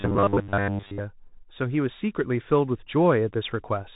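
A speech recording carried through the Bluetooth CVSD headset codec throughout, with nothing above about 3.8 kHz, plainly audible granular hiss, and scratchy, overloaded sibilants where the one-bit step cannot keep up. From 0.01 to 1.0 s the sound turns into a rigid, metallic robotic buzz at 100 Hz, most likely from short buffers of about 10 ms being repeated while most of the real audio is skipped.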